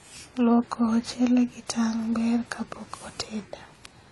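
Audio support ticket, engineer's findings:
Likely transcoding between lossy codecs, throughout. A starved AAC-like stage is re-encoded to MP3, so the artefacts are stacked: each codec's artefacts heard together, nothing above 11.5 kHz.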